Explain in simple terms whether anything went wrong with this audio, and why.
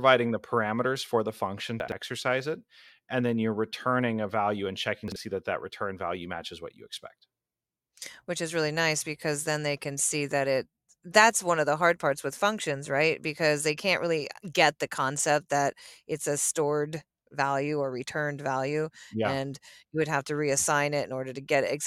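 A couple of spots sound scrambled. At 1.8 to 1.92 s and again at 5.08 to 5.16 s, there are chunks out of order: a small slice, which fits pieces about 40 ms long, plays late, after the bits meant to follow it. That jumbles the speech briefly.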